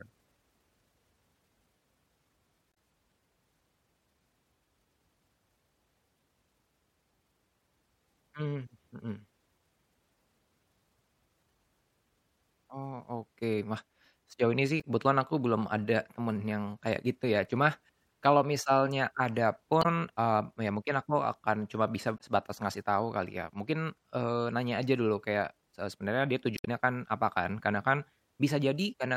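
Damaged data in a compressed stream breaks up this speech recording five times: at 2.71–2.76 s, 14.80–14.84 s, 19.81–19.86 s, 22.17–22.21 s and 26.56–26.68 s. Corrupted bytes make the decoder misread frames and lose sync until it finds the next valid header. Each spot comes out as a brief chirp, squawk, click or short hole of about 40–50 ms, and the last one lasts roughly 120 ms and adds about 4 ms to the timeline.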